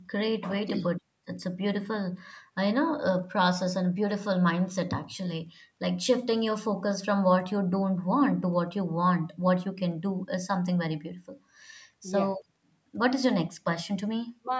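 Nothing in this speech reveals any technical fault.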